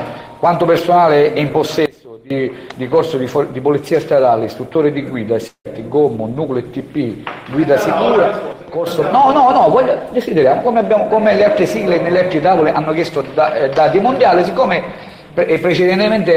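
At 1.86 s the level abruptly falls by about 19 dB, sound and background noise together, and snaps back at 2.30 s. At 8.52 s it drops again, by about 6 dB, until 8.87 s. Both are likely a sudden gain jump, a digital gain change applied without a ramp. From 5.47 s to 5.68 s the sound smears into a fading buzz, then goes quiet for roughly a tenth of a second before resuming with a piece missing. This is likely a long network dropout, where concealment filled the gap until it ran out.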